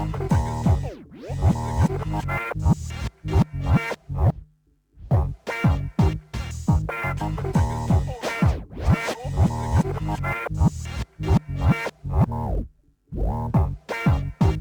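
A fine hiss and grittiness rides on the sound throughout, thickening on loud and bright passages and disappearing in silence. This is sample clock jitter: an unsteady converter clock, wandering by several microseconds, misplaces samples, leaving an error only about 35 dB below the signal.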